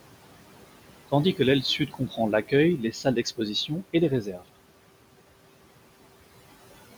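Across the whole clip the background sinks in the pauses and swells back under the talker. These are noise suppressor artifacts: the suppressor pulls noise-classified bands down by about 18 dB frame by frame, acting on room noise that sits about 17 dB below the speech.

Between 1.62 and 2.53 s, 2.78 and 3.4 s, and 3.93 and 4.43 s, parts of the speech turn faint and swallowed. This is speech cut by the noise suppressor, which mistook them for noise and lowered them by as much as about 13 to 14 dB. It affects a few hundred milliseconds in the first span and shorter stretches in the other two.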